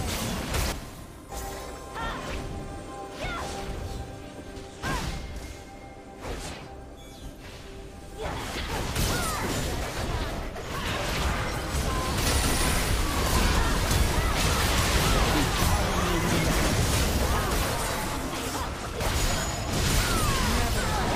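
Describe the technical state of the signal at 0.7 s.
At 0.72 s there's a brief blip from damaged data in a compressed stream: corrupted bytes knock the decoder out of sync until it finds the next frame header.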